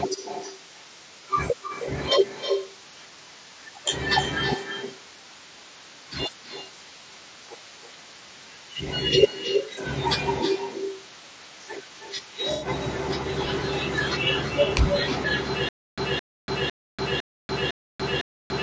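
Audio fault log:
Throughout: echo with no canceller. Every phrase is trailed by a quieter, thinner copy about 300 ms later, sitting about 8 dB below the direct sound. The far end's loudspeaker fed its microphone and nothing subtracted it, so the speech returns after the network round trip.
Throughout: low-delay AAC compression. The speech sounds rough and grainy, with noise filling the gaps between harmonics and an artificial-sounding top end below the 8 kHz limit of the call path. The likely cause is AAC-ELD at 32 kbps, whose short frames resolve pitch poorly.
1.67–1.72 s, 9.74–9.79 s, 12.53–12.68 s: AAC frame loss with concealment. Brief smeared, noisy or phasey patches replace the sound: about 30 ms at the first two points and about 90 ms at the third. The decoder rebuilt the missing frames from the last good spectrum, which fits one lost frame, then three.
15.69 s to the end: stutter with silent gaps. 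A 216 ms fragment repeats six times at an even pace, every 505 ms, with about 289 ms of digital silence between. The audio meant for that stretch never plays. A stalled stream re-serving its last chunk at each retry is the likely cause.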